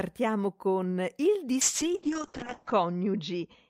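From 1.63 s to the end at 3.69 s, a call bitrate drop sets in. The bandwidth estimate collapses, so the encoder is starved of bits, and the coarse coding that follows fits a fall from roughly 40 kbps to around 6 kbps. The audio band narrows from 20 kHz to 8 kHz, dulling the top end, and for about 1.1 s at its lowest the speech sounds rough, watery and muffled.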